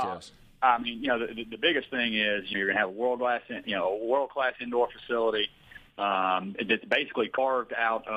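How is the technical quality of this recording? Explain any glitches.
The recording has two glitches from damaged data in a compressed stream, at 2.50–2.55 s and 7.33–7.38 s. In each, corrupted bytes made the decoder misread frames and hunt for the next header, so the disruption sits on frame boundaries rather than arising in the sound itself.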